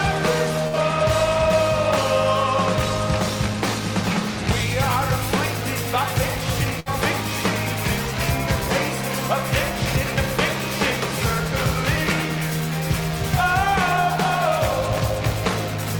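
Two bursts of packet loss, at 0.67 to 0.76 s and 6.80 to 6.89 s, left the receiver without audio. Each time it extended the last sound for about 60 ms while fading it, then resumed with roughly 60 ms of the original skipped.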